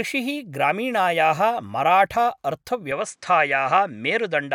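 A speech clip that changes character abruptly at 2.92 s and stays that way to the end: the top end disappears, leaving nothing above about 9.9 kHz, and a faint new background noise appears well below the speech, with no gap and no obvious jump in loudness. This is likely an input switched to a poorer device. On a spectrogram, the energy above 9.9 kHz stops at a sharp vertical boundary and the noise floor rises slightly, while the waveform envelope continues unbroken.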